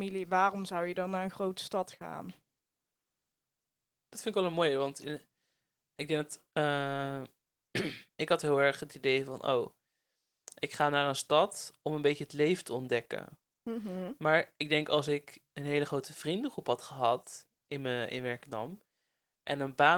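No technical faults are present in the speech, which carries only light Opus coding in its hybrid mode, with the full band kept up to 20.2 kHz and a level of detail that points to a rate near 20 kbps.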